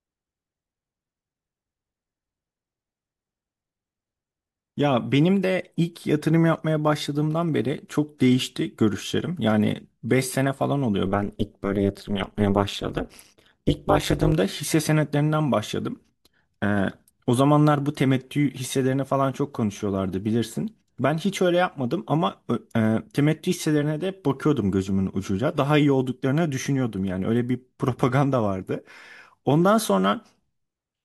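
From 11.07 to 14.33 s, the speech has been split into windowed frames and rejoined with an overlap whose window gains fail to add up to a constant, producing overlap-add ripple. The level swings up and down once per frame, at around 200 Hz, with a depth of about 60 dB, so the signal nearly vanishes between frame centres. The speech takes on a harsh, metallic buzz for that stretch.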